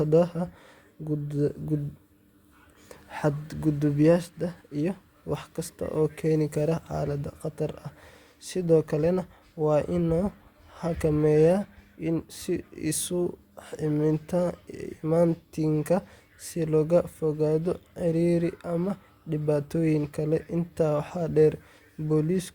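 Speech, and nothing is technically wrong with it.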